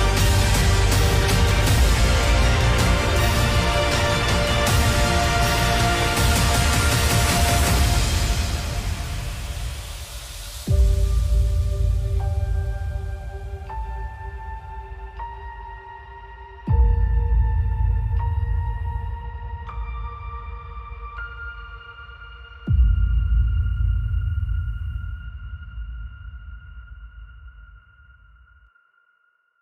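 No dropouts, clicks, distortion, level jumps or timing breaks turn up anywhere in the clip, so there is nothing to log against it.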